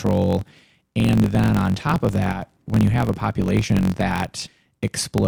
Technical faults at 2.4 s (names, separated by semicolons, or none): block size mismatch (truncated); one channel drops out